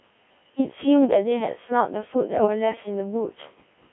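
Codec 2 vocoder coding runs through the whole clip. The decoder rebuilds speech from pitch, voicing, energy and a coarse spectral envelope rather than the original waveform, so it sounds buzzy and robotic, squeezed into a 200 Hz to 3.6 kHz band, with heavy damage that fits a 1.3 kbit/s mode.

Bit errors on digital voice radio strike from 2.36 to 2.47 s. Corrupted bits, at a rate near one in twenty, feed wrong pitch, level and spectral values to the synthesiser, producing a brief warbling, bleeping lurch over what sounds like about three frames.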